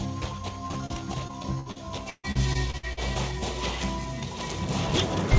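The audio comes through a call path with nothing above 8 kHz, which fits a wideband codec such as G.722. Short concealed packet loss appears three times, at 0.68 to 0.83 s, 0.72 to 0.77 s and 0.86 to 0.91 s. Between 20 and 40 ms of audio went missing each time. The receiver bridged each hole by extending the preceding sound, so these moments come across as brief smears or wobbles. Repeated packet loss follows from 1.27 to 2.99 s, with about ten separate holes. The longest lasts 139 ms, and roughly a quarter of that stretch is patched-in sound. Each patch is barely finished before the next gap arrives. This makes the passage choppy, with pieces dropping out.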